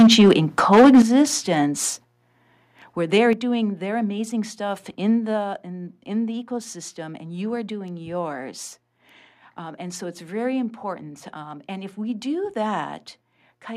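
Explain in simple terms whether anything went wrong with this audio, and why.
Yes, something went wrong near the start of this speech. From 0.0 to 0.32 s, and again from 0.72 to 1.22 s, the loudest parts sound harsh and crackly, as if the sound is breaking up. This is microphone overload. The microphone was likely set too high, so the strongest moments were louder than the recording could hold. Their tops were chopped flat, and that flattening is what you hear as the rough, distorted edge.

The level then drops suddenly three times: at 1.02 s, at 2.04 s, and at 3.33 s, between "where they're" and "doing their amazing stuff". The voice and the background both get quieter at once, in a single step rather than a gradual fade. This is the microphone volume being stepped down. The call software likely noticed the distortion and turned the microphone's input down, and it did this repeatedly.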